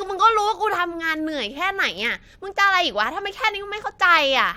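No technical faults are audible.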